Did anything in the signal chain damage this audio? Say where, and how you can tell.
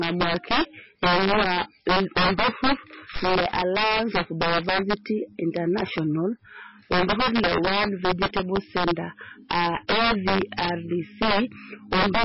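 Yes. Integer overflow runs through the whole clip, at the sample-format conversion stage: peaks crack rather than flatten. About 5 dB of overdrive pushed a few percent of samples past the integer limit, and instead of being limited they wrapped to the opposite sign, jumping across the full range.

MP3 compression, throughout, is the likely cause of the heavy codec damage: watery, swirling texture and nothing above 5.6 kHz. The encoder dropped weak frequency lines frame by frame and cut the treble at a fixed point, which points to a very low bitrate, around 20 kbps.

Phantom power thump from 3.16 to 3.37 s, in the analogue wiring: a deep low thump that dies away with a decay of about 47 ms. A supply was switched on or off on a live input, and the voltage step passed through the coupling capacitors into the signal.

Pre-echo at 9.49 s and 9.88 s, from the codec: a short hiss runs ahead of each sharp attack, spread over 16 ms and 14 ms. 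The transform block spreads quantisation noise sized for the loud attack into the quiet moment before it, and the onset softens.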